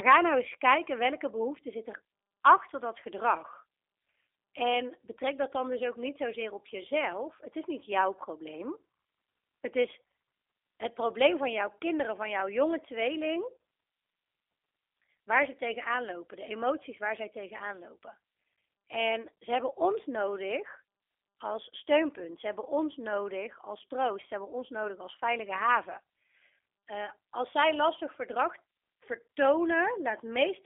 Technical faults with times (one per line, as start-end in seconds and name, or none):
0.00-30.66 G.729 codec